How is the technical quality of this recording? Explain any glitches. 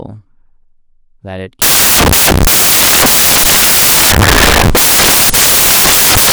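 Poor, because of one serious fault. From 1.62 s to the end, the speech turns into samples built from the wrong bytes. The reader assembles each sample's bytes incorrectly, so the noisy low bits become the loudest part. It sounds like harsh white noise.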